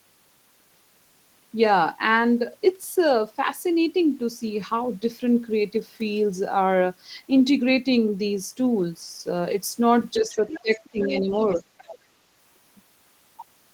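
From 10.16 to 10.46 s the talker's speech sags slightly, a dip of a few decibels. This is speech suppressed in double talk, likely from an echo canceller that could not tell the talker apart from the loudspeaker echo while both sides spoke and so turned everything down. The suppression grows much deeper from 10.62 to 11.31 s, pulling the speech down by roughly 20 dB so that it nearly drops out. A brief further dip of about 10 dB follows at 11.57 to 11.63 s.

Overlapping these dips, from 10.3 to 11.61 s, a second, quieter voice sits well beneath the talker. This is the other side's voice leaking through, likely because the loudspeaker playback reached the microphone and was not fully cancelled. It returns even fainter from 11.78 to 11.97 s, a short scrap far below the main speech.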